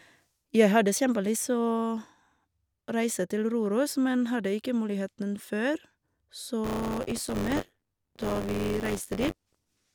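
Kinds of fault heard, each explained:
Buffer tearing, 6.64 s to the end at 9.95 s: the software filling the playback ring buffer and the hardware reading it have slipped out of step, so they cross inside every period. A small slice of each buffer, around a sixth, replays speech from one lap earlier, roughly 20 ms old, with hard joins on both sides. This produces a steady robotic buzz at 93.8 Hz over the speech, which fits a 512-sample buffer.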